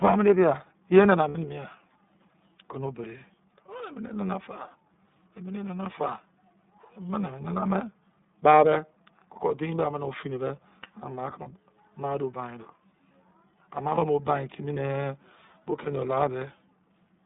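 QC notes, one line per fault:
Throughout: iLBC codec. The speech sits in a narrow band of about 150 Hz to 3.7 kHz, with nothing above. Each frame's excitation is coded on its own, which gives the plainly audible rough, slightly synthetic texture. This fits iLBC's 30 ms mode at 13.33 kbps.
1.29–1.38 s, 11.42–11.47 s, 13.95–13.99 s: lost iLBC frames. The first gap fits two missing frames (about 60 ms), and the other two fit one each (about 30 ms). The decoder repeats the last pitch cycle mixed with noise, so each gap sounds like a briefly held, buzzy vowel. The speech recovers almost at once because iLBC frames decode independently.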